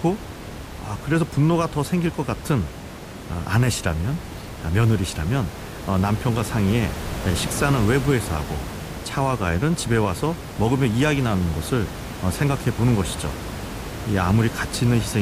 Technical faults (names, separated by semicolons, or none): none